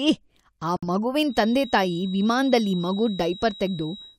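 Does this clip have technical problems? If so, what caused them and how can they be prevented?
Yes. From 0.77 to 0.84 s the speech drops out completely, leaving a hole of about 74 ms, and it resumes further along as though it had kept playing underneath. This is likely a Bluetooth dropout, where packets failed to reach the headphones in time and the output went silent until valid ones arrived. The loss fits a handful of missing packets. On a waveform it appears as a flat gap, and on a spectrogram as a clean vertical blank column. Keeping the headphones close to the source, with no obstructions or competing 2.4 GHz traffic, would prevent it.

From 1.22 s to the end there is a thin, steady feedback whistle at 3.8 kHz, sitting roughly 20 dB below the speech and swelling and fading slowly in level. The likely cause is a loudspeaker-to-microphone loop poised right at the edge of feedback, so a single frequency keeps ringing without building into a howl. 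A spectrogram would show a narrow horizontal line at 3.8 kHz persisting through gaps in the speech. Lowering monitor gain, using headphones, or notching that frequency would prevent it.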